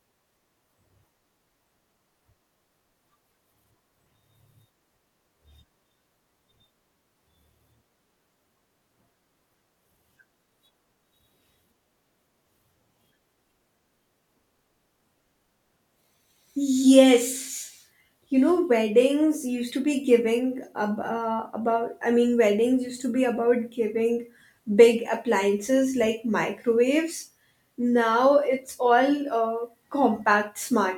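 No technical faults can be heard anywhere in the recording.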